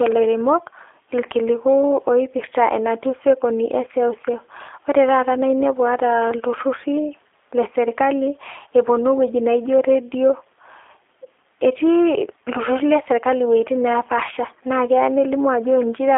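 From start to finish the speech carries the sound of the G.729 codec, with a rough, slightly synthetic quality that fits an 8 kbit/s G.729A stream. Each 10 ms frame is rebuilt from a vocal tract filter, a pitch predictor and a few pulses, so fine detail is lost. A spectrogram shows nothing above 3.7 kHz and a telephone band of roughly 300 Hz to 3.5 kHz. The waveform looks coarsely reconstructed, and the codec damage is plainly audible.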